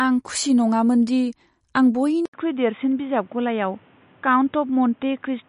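From the start, the speech has a hard treble ceiling at 10.6 kHz and plainly audible watery, swirling artefacts. This is likely MP3 compression at a low bitrate, around 40 kbps. Starved of bits, the encoder drops the top band and flickers weak frequency lines on and off.

At 2.26 s an 80 ms silence breaks the sound. After it, everything above 3.8 kHz is gone until the end, and the speech turns dull and boxy. A faint new noise floor sits well below the speech, and loudness stays about the same. This points to the input likely switching to a poorer, narrower-band device.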